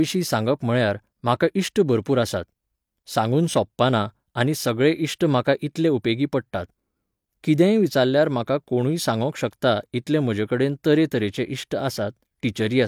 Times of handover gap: none

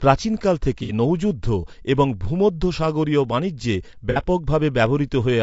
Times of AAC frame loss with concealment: 0.83-0.92, 4.10-4.20

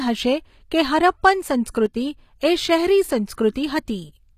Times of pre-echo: 1.70-1.75

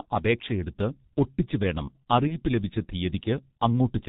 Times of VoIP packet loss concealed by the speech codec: 2.28-2.38

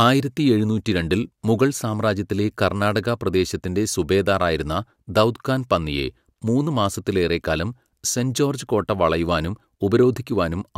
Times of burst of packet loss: none

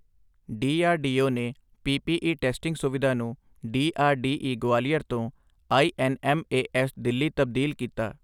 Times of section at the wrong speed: none

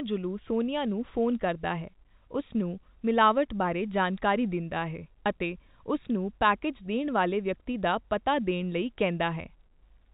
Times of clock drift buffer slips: none

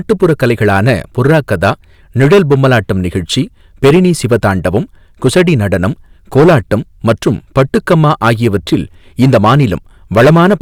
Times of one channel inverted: none

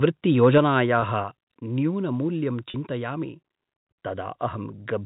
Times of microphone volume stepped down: 0.58

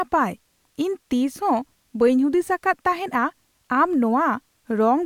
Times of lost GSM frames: none

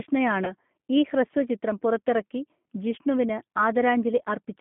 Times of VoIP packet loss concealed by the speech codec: 0.45-0.53

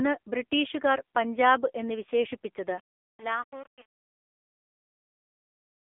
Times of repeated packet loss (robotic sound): none

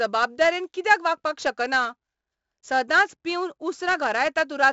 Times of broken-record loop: none

